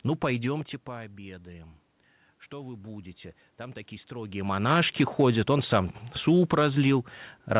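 From 2.51 to 4.77 s, the automatic gain is rising. The input fell by about 16 dB, so the gain slowly lifted voice and room noise together by about 3 dB.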